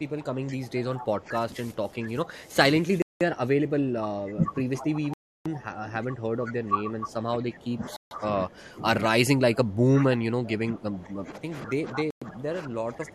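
Speech that's being ground down almost the whole way through. From 0 to 2.57 s and again from 2.73 s to the end, the voice keeps dipping by up to about 15 dB and losing presence, which is likely speech suppressed in double talk, with the echo canceller ducking the talker while the far side is also active. On top of that there are four Bluetooth stalls where the sound drops to dead silence and then resumes: 3.02 to 3.21 s (187 ms), 5.14 to 5.46 s (320 ms), 7.96 to 8.11 s (148 ms) and 12.11 to 12.22 s (111 ms). Each one fits the headphone buffer running dry while delayed packets are resent. There are also two short echo leak scraps, at 4.82 to 4.86 s and 11.94 to 12.00 s. Each is a faint copy of the voice about 210 ms late, roughly 20 dB and 15 dB down respectively, likely where a loudspeaker's pickup slipped past the far end's canceller.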